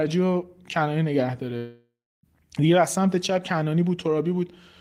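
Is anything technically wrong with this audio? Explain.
Yes, there's a long network dropout in the speech from about 1.57 s to 2.26 s. Around 0.66 s of audio goes missing, likely because packets stopped arriving for that stretch. The receiver tries to cover the hole by carrying the last bit of sound forward as a buzz or hiss that fades away, and about 0.32 s of plain silence follows. Then the speech picks up again, with that chunk simply gone.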